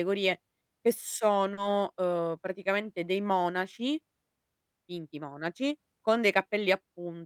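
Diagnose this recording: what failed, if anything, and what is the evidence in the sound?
Network stage: short concealed packet loss at 1.53 to 1.59 s. About 40 ms never arrived. The decoder extrapolated the preceding sound, leaving a brief smear before blending back.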